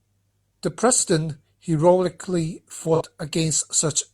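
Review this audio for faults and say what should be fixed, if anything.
AAC frame loss with concealment at 2.95 to 3.01 s. For about 43 ms the speech turns into a brief smeared, noisy patch, a duration that fits a single missing AAC frame. The decoder had nothing to decode for that stretch, so it rebuilt the gap from the last good spectrum with randomised phase, which keeps the level steady but loses the fine detail before normal decoding resumes. Protect the AAC stream against loss with forward error correction or retransmission so frames reach the decoder intact.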